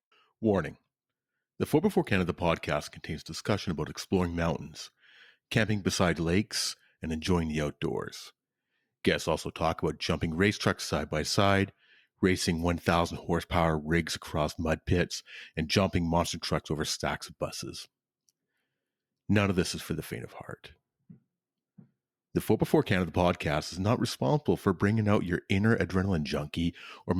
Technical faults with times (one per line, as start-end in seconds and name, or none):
0.00-6.00 adaptive stream starting at a low bitrate